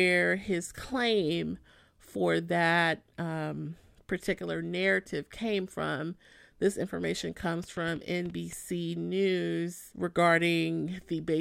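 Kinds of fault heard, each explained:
Train of clicks: from 7.64 to 8.54 s, about seven short, similar pulses arrive at an uneven pace, roughly 6.7 per second, ticking over the speech at about the level of the speech itself. Likely interference or a faulty connection or power supply. A waveform shows narrow spikes, and a spectrogram thin full-height vertical lines.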